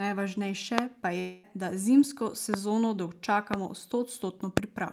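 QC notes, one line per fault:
0.78, 2.54 (just after "da zimsko"), 3.54 and 4.57 s: loud pop. Single sharp clicks, about 20 to 25 dB above the speech, which continues underneath. Likely a brief electrical pulse.
1.19 to 1.45 s: long network dropout. About 0.24 s of speech is lost, replaced by a fading buzzy continuation before "da zimsko" resumes. Likely packets never arrived.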